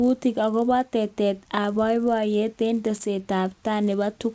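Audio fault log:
Throughout: resampler restarted on every block. A steady buzz at 100 Hz rides under the speech and disappears in the pauses, which marks it as signal-dependent rather than added noise. Each 10 ms block was rate-converted in isolation, consistent with a 24 kHz to 16 kHz conversion, so the filter lacked the true neighbouring samples at every block edge. The resulting small edge error repeats once per block, fusing into a buzz instead of separate ticks.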